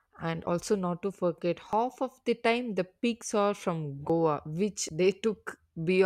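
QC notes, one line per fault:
0.47, 1.73, 3.03, 4.10 and 4.89 s, dropped buffer (overrun): each is an abrupt forward jump in the speech with no gap of silence. The largest skip, near 4.10 s, loses roughly 70 ms. The likely cause is samples overwritten before being collected, with both sides spliced together.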